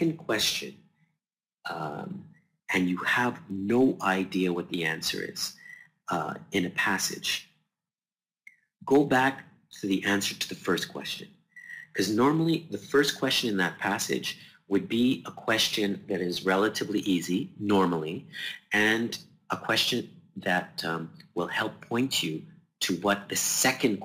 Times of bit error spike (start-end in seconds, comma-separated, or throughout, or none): 3.51